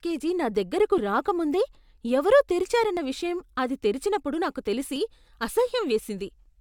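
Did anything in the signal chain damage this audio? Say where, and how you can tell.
Yes. Overlap between stream segments occurred at the streaming stage. Tiny skips fall at 0.98, 2.97 and 4.96 s, after "నా దగ్గరకు", "నా దగ్గరకు రాకముందే ఎవరో" and "విషయం అది తెరిచినప్పుడు నాకు". They repeat every 2 s. Overlapping segment time stamps made the player trim 5 to 17 ms of real speech, so the waveform jumps.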